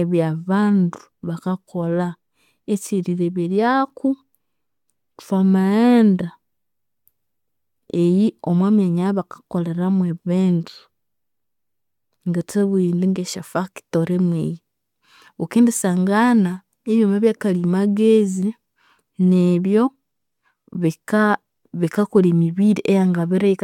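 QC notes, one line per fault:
19.86 s, damaged data in a compressed stream: a short stretch of the encoded speech arrived corrupted, so the decoder could not read the frame at that point and had to lose its place and hunt for the next valid frame header before resuming. The result is a brief glitch of under 20 ms that cuts across the speech. It sounds unnatural because the intended signal is briefly lost there.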